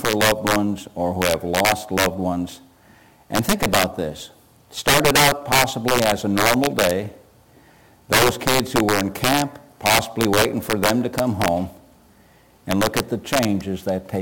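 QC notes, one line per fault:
Throughout, integer overflow: loud peaks break into violent, snapping cracks far harsher than ordinary clipping. The signal is pushed about 9 dB too hot, and a small share of samples, around 2 percent, wrap past the integer limit and flip to the opposite extreme instead of being held.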